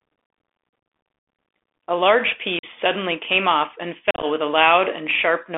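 A speech recording heard through a narrow, boxy band of roughly 250 Hz to 3.5 kHz, with scratchy sibilants, a grainy hiss under the voice and distortion on loud passages. This is the sound of a Bluetooth CVSD headset codec, whose one-bit, slope-tracking coder at what sounds like a 64 kbps link cannot keep up with sharp, bright waveforms. The speech also drops out abruptly three times. From 1.19 to 1.28 s there is a 90 ms hole, which fits around ten lost packets. At 2.59 to 2.64 s the gap is about 45 ms. Between 4.11 and 4.25 s the loss is broken up over about 120 ms, with the longest gap near 38 ms, so it sounds choppy and crackly. This is unconcealed Bluetooth headset packet loss: missing voice packets are filled with silence, not smoothed over.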